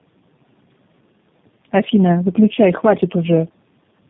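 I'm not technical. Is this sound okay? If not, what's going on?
No. From start to finish, the speech has tandem speech coding: the call passed through two different speech-compression systems one after another, with an ordinary phone link in between, so the voice was squeezed, unpacked and squeezed again. The second stage had to work on sound already damaged by the first, so the flaws pile up. The result is rough, warbly and muffled, with nothing above about 3.7 kHz, which is why it sounds dull and boxy.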